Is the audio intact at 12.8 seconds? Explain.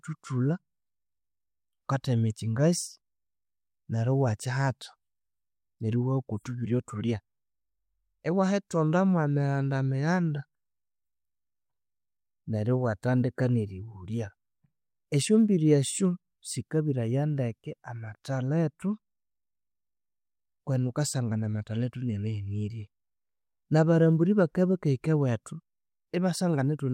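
Yes, the audio is intact at 12.8 seconds, with no audible fault at that moment.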